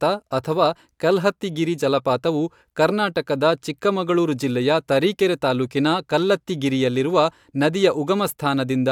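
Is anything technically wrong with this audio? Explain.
No, nothing stood out as technically wrong when listening to this speech.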